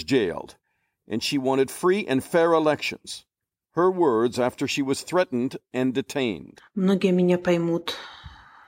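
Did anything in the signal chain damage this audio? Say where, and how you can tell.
No, nothing in the signal chain damaged this audio.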